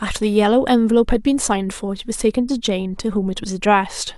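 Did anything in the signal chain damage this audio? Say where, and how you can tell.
No, nothing along the chain seems to have touched this speech recording, so there's no damage to point to at any stage.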